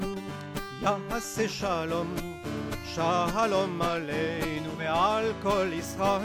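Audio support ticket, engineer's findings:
Digital radio blending to analogue, 0.86 s to 4.95 s. Receiver dropped digital reception, cross-faded over 352 ms to the station's FM broadcast, then returned. Symptoms during the FM segment: hiss roughly 40 dB below programme, level shift of about 1 dB. Component: hybrid tuner blend logic.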